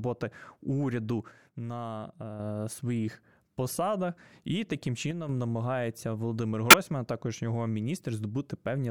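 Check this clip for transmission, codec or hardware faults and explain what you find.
There are three faults here: two short level dips and one frame decoding glitch.

From 1.32 to 2.40 s, and again briefly from 5.11 to 5.29 s, the speech suddenly drops by about 6 dB and then jumps back up. The likely cause is one channel dropping out. When one side of a stereo pair goes silent and the two channels are summed to mono, everything the channels had in common loses half its contribution. That's why the level falls abruptly rather than fading.

At 6.70 to 6.74 s there's a short blip that peaks at roughly -10 dBFS. It comes from a corrupt frame being decoded. One compressed frame arrived with flipped bits, and the decoder played it anyway. The misread gains and codes put energy at the wrong frequencies for just the length of that single frame, so you hear a brief squeak or burst of noise.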